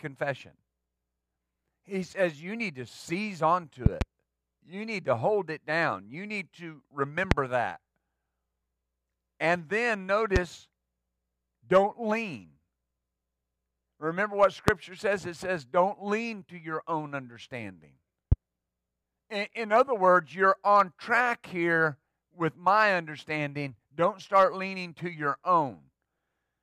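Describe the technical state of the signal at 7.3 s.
At 7.31 to 7.34 s, right after "need to", a single loud pop sits on top of the speech, peaking around 25 dB above it. A sudden electrical pulse, likely from a plug, switch, static discharge or driver glitch, was added to the signal and shaped by the circuitry that followed it, giving a sharp thump. Unlike a dropout click, nothing is lost. The speech runs on uninterrupted beneath the pop.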